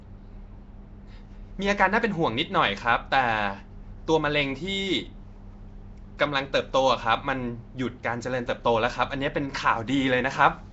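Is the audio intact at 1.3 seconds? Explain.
No. At 1.3 seconds, as across the whole speech clip, there is clearly audible Nellymoser compression, likely from the Nellymoser Asao codec at a rate consistent with about 32 kbps. Each short block gets a fixed, small bit budget, so weak bands are replaced with noise, giving a rough, hissy halo and a smeared, underwater tone. On a spectrogram, nothing appears above 7.8 kHz, and blocky noise fills the quieter bands.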